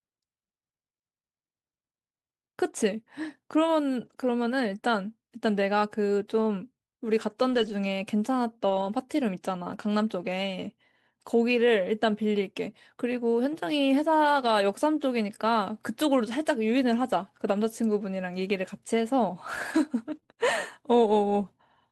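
At 4.05 to 4.11 s, 7.49 to 7.71 s and 8.69 to 8.87 s there are three spots where lost packets were rebuilt from error correction. No gap is heard. Instead, 40 ms, 120 ms and 100 ms of speech turn rougher and noisier. The decoder played the low-bitrate copy carried in the following packet, which fits runs of about two, six and five lost 20 ms packets.

From 20.15 to 20.39 s, repeated packet loss gives a choppy, robotic stretch with four short holes. About 80 ms is missing, and the longest hole is 27 ms. Around 73 ms, or 31% of the span, is filled by extending the previous sound. Some pieces of speech are simply absent.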